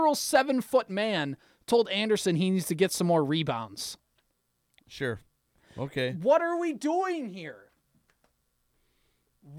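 Nothing here calls for comment: the speech runs along without a single technical fault to pick out at any point.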